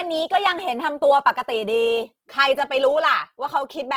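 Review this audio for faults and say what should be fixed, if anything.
Opus compression runs throughout the clip, from start to finish. The speech has a noisy, rough, grainy texture, and tonal parts sound smeared into hiss rather than swirling. This is likely the music (CELT) mode at a low bitrate, which fits around 16 kbps. It keeps each band's energy but fills starved bands with folded or noise content, while the full bandwidth is still held. To fix it, re-encode from the original source at a higher Opus bitrate.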